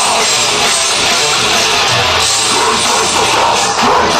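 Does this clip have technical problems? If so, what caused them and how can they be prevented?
No, this clip has no technical problems. There is nothing to trace back to a cause, so no preventive steps are needed.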